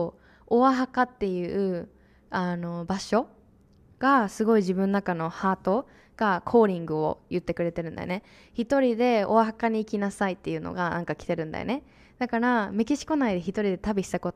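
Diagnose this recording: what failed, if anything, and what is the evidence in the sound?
Listening through the speech, nothing stood out that would point to a failure at any stage of the chain.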